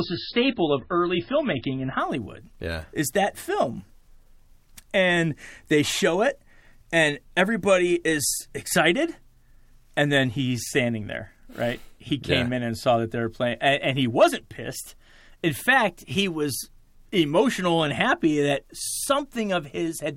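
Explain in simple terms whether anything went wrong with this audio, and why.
For the first two seconds the speech sounds dull and smeared, with nothing above about 5.5 kHz. That's an adaptive stream starting at a low bitrate: the player began on a cheap version to start fast, then switched to a much better one at 2.0 s, so the sound suddenly clears up with no gap.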